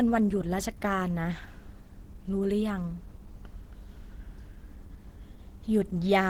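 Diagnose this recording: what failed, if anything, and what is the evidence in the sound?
The stage is the codec. For the whole clip the speech carries plainly audible coding damage: a hoarse, grainy texture with a muffled core, while content still reaches about 20.1 kHz, so the band is not truncated. This is likely Opus compression at a low rate, which fits roughly 16 kbps in hybrid mode. The lower band is coded by the SILK speech coder, which causes the hoarseness, and the upper band is energy-matched and noise-filled, which causes the grain.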